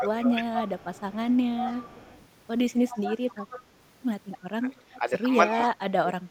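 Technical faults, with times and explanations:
0.00–0.56 s, 1.14–1.27 s, 4.60–5.11 s and 5.49–6.30 s: speech suppressed in double talk. The talker's level dips by about 10–15 dB early, and later by about 25 dB and then about 35 dB, likely because the echo canceller ducked it while both sides spoke. Nothing extra is added here; the speech itself is cut back.
0.54–2.27 s, 2.88–3.63 s, 4.31–4.38 s and 5.53–5.67 s: echo leak. A copy of the speech returns 270 ms late, about 10 dB below it, about 20 dB below it in the brief 4.31 s scrap and about 15 dB below it at 5.53 s. This is likely loudspeaker pickup that the loudspeaker side's canceller missed. Unlike suppression, the speech gains a delayed repeat instead of losing level.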